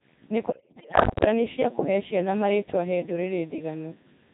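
From the first moment to the end, the speech carries heavy Codec 2 vocoder damage. The sound is robotic and buzzy, which fits Codec 2 running at about 2.4 kbit/s. Only pitch, voicing, energy and a coarse spectral envelope survive, and the decoder rebuilds the voice from sine waves. On a spectrogram the harmonics appear as unnaturally regular stripes under a smeared, blocky envelope. The waveform looks synthetic and does not resemble the original shape.

From 0.50 to 1.26 s, just before "cia kũhee ciana marĩtwa", bit errors on digital voice radio break the synthesis. Flipped bits in a few dozen frames suggest an error rate of several percent. Each corrupted frame gets the wrong pitch, level or voicing, so the sound turns into bleeps, warbles and robotic gibberish. On a spectrogram the harmonic stripes jump abruptly from frame to frame. The waveform shows sudden steps in amplitude.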